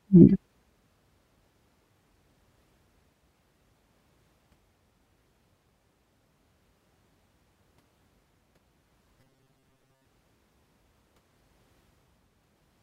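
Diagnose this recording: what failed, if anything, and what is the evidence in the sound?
From 9.2 to 10.06 s the speech becomes a rigid, metallic buzz pitched at 133 Hz that loosely follows the words. This is robotic sound from repeated short buffers, likely a driver or buffer underrun: about half the audio is replaced by looped chunks of about 7.5 ms.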